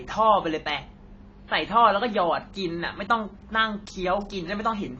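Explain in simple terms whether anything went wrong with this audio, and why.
Something's off the whole way through. The speech sounds dull and a bit smeared, with a fizzy, warbly edge, and there's nothing above about 8 kHz. That's most likely AAC compression squeezed too hard: the encoder throws away detail it thinks you won't notice.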